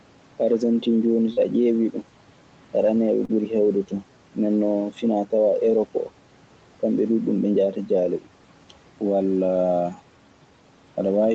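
Short concealed packet loss at 1.33 s and again at 3.25 s: each time about 40 ms of the call arrived too late for the decoder. The receiver filled the gap by carrying the preceding sound forward, then crossfaded back, leaving a brief smear or wobble in the speech.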